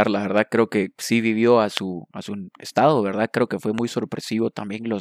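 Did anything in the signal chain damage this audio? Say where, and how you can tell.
Yes. Two loud pops sit on top of the speech: one at 1.77–1.79 s, between "que sí vivió a" and "a su estado", and one at 3.78–3.80 s, just after "que fue". Each is a single sharp transient, roughly 20 dB and 15 dB above the signal, with the speech carrying on beneath. The likely cause is a voltage step in the analogue wiring, such as a plug, switch or static discharge. A waveform shows each as a tall isolated spike, and a spectrogram as a thin broadband vertical stripe.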